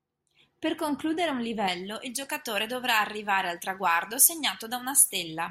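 Speech, with pre-emphasis left on from 1.68 s to the end at 5.51 s. The treble boost was never undone by a matching cut. Highs sit about 11 dB up at 10 kHz relative to 1 kHz. The sound turns thin, bright and sibilant.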